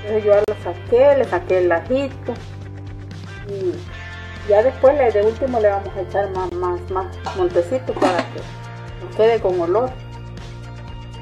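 At 0.44 s and again at 6.49 s the sound drops out abruptly for about 37 ms and 22 ms, a gap between stream segments. The timestamps of consecutive segments don't quite meet, so the player pads the hole with silence, adding time rather than losing any audio. The two holes sit about 6 s apart, which fits 6-second segment boundaries. Each one is heard as a brief, hard-edged dropout.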